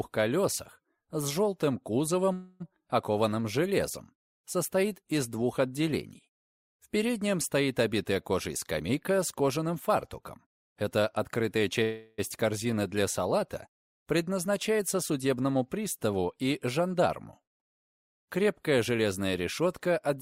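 At 2.33 to 2.62 s and again at 11.83 to 12.20 s there is a call audio freeze. Packets were likely delayed until the jitter buffer ran dry, so the last sound is stretched into a buzz or hiss for 267 ms and 351 ms, with nothing lost. On a spectrogram this shows as a smeared, unchanging band. The waveform does not drop to silence.

Jitter buffer speed-up runs from 8.11 to 11.82 s at 107% speed, trimming about 300 ms. It recurs from 14.79 to 15.43 s at 108% and from 19.62 to 20.17 s at 107%, trimming about 50 ms each time. The receiver cut repeated pitch-period slices to shrink excess delay, so the sound hurries without changing pitch. On a spectrogram the harmonic spacing stays the same while events pack closer together in time.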